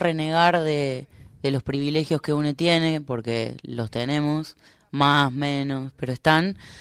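Speech, with a lost packet rebuilt from error correction between 1.71 and 1.81 s, just after "de de los". No gap is heard, but the patch sounds rougher and noisier, as the decoder played low-bitrate redundant copies; the damage fits about three lost 20 ms packets.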